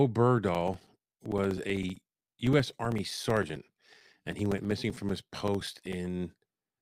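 From 0.48 s to 5.93 s, periodic USB or driver dropouts cut a few milliseconds of the speech to silence every 64 ms, about a hundred times. They give a steady ticking under the speech. The waveform shows evenly spaced flat gaps, and the spectrogram shows thin vertical broadband lines.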